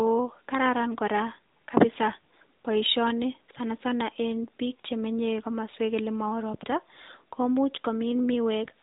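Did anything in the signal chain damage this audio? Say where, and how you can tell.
Yes. AMR narrowband mobile codec damage runs throughout, at the codec stage. Nothing passes above 3.8 kHz, and the speech has a plainly audible buzzy, synthetic edge that fits a mid-rate mode near 10.2 kbps. Each 20 ms frame is rebuilt from sparse pulses, stripping natural texture.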